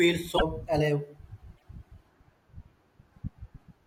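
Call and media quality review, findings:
Glitches at 0.35–0.42 s and 1.56–1.64 s, speech jumping ahead. Likely broken MP3 bit reservoir: about three 26 ms frames misdecoded.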